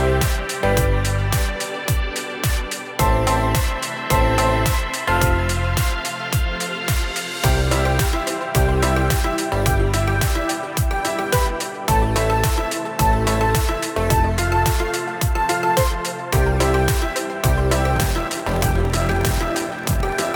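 Block size mismatch (padded) runs from 17.94 s to the end at 20.36 s. Each written block, which fits 1024 samples, is shorter than the block read downstream, so zeros fill the remainder, causing a 41.7 Hz buzz and slowing the audio to 0.889 times normal speed while keeping its timbre.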